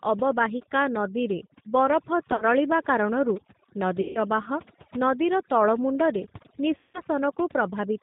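Right from the start the speech carries overdone noise removal. The suppressor was pushed too hard, so any band near its noise estimate gets pulled right down, taking the quieter bits of the voice along with it. You hear the background drop away and break up into little twinkling specks.

Layered on top, and plainly audible the whole way through, is the G.729 codec. The sound points to an 8 kbit/s G.729 stream. The voice is rebuilt from a filter, a pitch predictor and a few pulses per frame, so nothing gets past 4 kHz and it comes out rough and a bit synthetic.

Then there's VoIP packet loss concealed by the speech codec, three times. At 2.32 to 2.44 s the gaps are scattered, adding up to about 60 ms, with the longest stretch around 40 ms. At 4.01 to 4.19 s it's roughly 140 ms gone, and at 6.77 to 7.03 s about 170 ms. Each time the decoder keeps extrapolating from its last pitch and filter while turning the gain down, so you get a fading smear. 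The voice stays weak for a moment after the packets come back.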